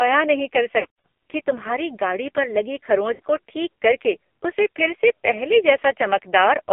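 Throughout the clip the speech carries the signature of the AMR narrowband mobile codec. The band is confined to roughly 250 Hz to 3.4 kHz, and the coding damage is heavy: voiced sounds are buzzy and synthetic. This fits a low mode around 5.9 kbps, where each 20 ms frame gets very few pulses to drive the vocal-tract model, so fine detail is simply not transmitted.

From 0.80 to 1.06 s, between "नहीं कर" and "कि तुम्हारी गाड़ी पर", lost AMR speech frames break up the audio. About 200 ms of frames are missing across a 240 ms span, with the longest gap around 120 ms. The decoder stretches the last good pitch and spectral settings while fading the gain, so the sound warbles, drags and dips before recovering roughly. At 3.14 to 3.20 s, after "तुम्हारी गाड़ी पर लगी", a shorter 60 ms loss causes a brief smeared dip before "को ठीक करके उसे".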